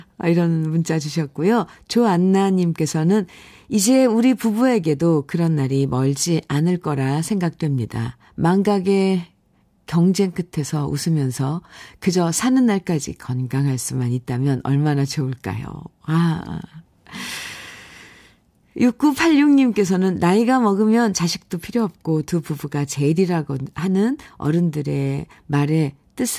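A speech recording, with no technical fault to point to anywhere in it. Nothing calls for a time stamp or a cause.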